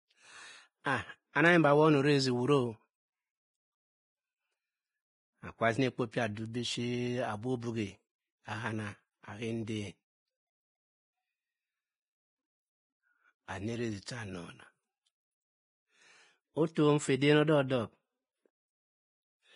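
Vorbis compression runs throughout the speech: a hissy, grainy texture with nothing above 10.6 kHz, likely from heavy Vorbis coding at a rate around 18 kbps quantising the treble into noise. Pre-echo appears at 0.84 to 0.86 s, 1.33 to 1.36 s and 16.75 s. Quantisation noise spread across each transform block fills the quiet moment before a sharp attack, leaving a brief hiss of 17 to 25 ms ahead of it.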